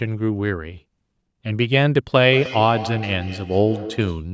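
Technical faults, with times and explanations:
2.24 to 4.28 s, feedback echo between two devices: the speech returns as distinct repeats spaced about a fifth of a second apart, the loudest about 13 dB below the direct sound. A second device in the room replays this microphone's signal, the microphone picks it up again, and neither echo canceller removes sound from the other device. Unlike room reverberation, which is a smooth tail, these are separate copies at a fixed spacing.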